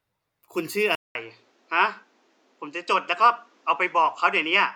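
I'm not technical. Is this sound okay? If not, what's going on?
No. At about 0.95 seconds there is a brief gap of roughly a fifth of a second, and from then to the end the speech sounds duller, with nothing above about 8.2 kHz and a faint new background noise, though the loudness stays about the same. This is most likely an input switched to a poorer device: the recording system changed its input partway through, and the replacement picks up a narrower range of sound.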